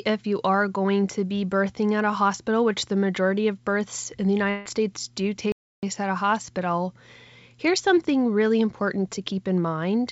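Right after "of births in the", at 4.50 s, there's a long network dropout running to about 4.68 s. Around 160 ms of audio never arrives, likely lost packets, and the receiver papers over it by stretching the last sound into a fading buzz or hiss, with no true silence.

Then at 5.52 s the speech just stops dead for about 0.31 s, until 5.83 s, before carrying on with "at a hospital". That's a playback stall, likely the player running dry or getting blocked. Through all this, the call path's G.722 coding keeps everything below 8 kHz.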